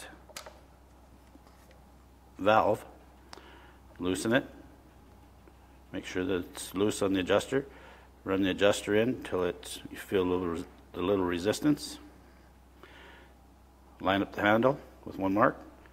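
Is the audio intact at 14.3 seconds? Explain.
Yes, the audio at 14.3 seconds is intact, with no fault at that moment.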